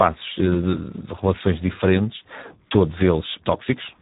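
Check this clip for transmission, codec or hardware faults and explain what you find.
One codec fault runs through the whole clip. Speex codec damage is heavy from start to finish. The CELP coder has too few bits to model the excitation, which points to a low bitrate around 8 kbps. The speech sounds hoarse and noisy, with nothing above 3.8 kHz.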